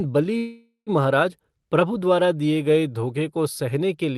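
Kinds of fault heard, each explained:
Call audio freeze: from 0.37 to 0.90 s the speech stalls, most likely because packets were held up and the jitter buffer ran dry. The receiver stretches the last sound into a fading buzz that ends in about 130 ms of silence, then resumes where it stopped. Nothing is lost, but everything after runs about half a second late. A spectrogram shows smeared flat bands decaying into a blank gap, and the waveform shows a tapering tone, then a flat line.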